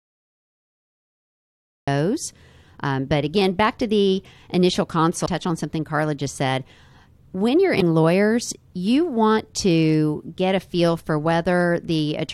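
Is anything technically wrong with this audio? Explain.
Yes, there are two kinds of fault in this speech clip.

The first is a cut-off start. The file holds digital silence from 0 to about 1.88 s, and then the speech starts abruptly in the middle of a sound, because capture began late. There is no natural onset or fade-in, so the entry is hard and may click. A waveform shows a dead-flat line that jumps straight to speech at 1.88 s, and a spectrogram shows black giving way to energy along a sharp vertical edge.

The second is damaged data in a compressed stream, at 5.25 s and again at 7.80 s. At each point part of the encoded stream is corrupt. The decoder misreads those frames, loses its place and hunts for the next valid frame header, which produces a brief chirp or blip. Each event lasts under 20 ms. A spectrogram shows a thin vertical smear of broadband or oddly patterned energy, and a waveform shows a short irregular burst or discontinuity.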